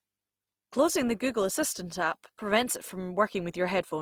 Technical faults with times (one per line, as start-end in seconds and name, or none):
0.00-4.01 Opus compression